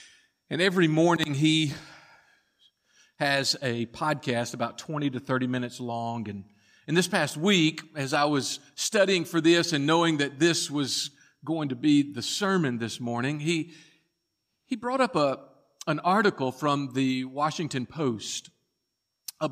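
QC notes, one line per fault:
No fault found, so there are no QC notes to give.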